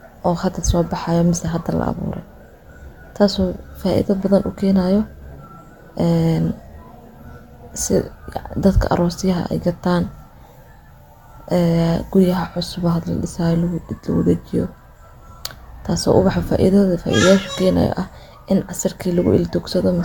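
Speech throughout showing generation loss: a swirly, hollow smear with softened consonant attacks and nothing above 17 kHz. The artefacts build beyond what one encode would leave, likely from re-encoding about three times through AAC-LC near 96 kbit/s, with each pass requantising on a shifted frame grid.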